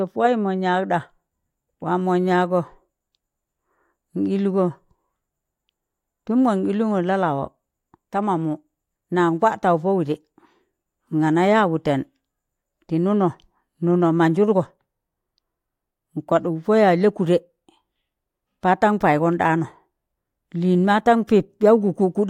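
No technical faults can be heard in this recording.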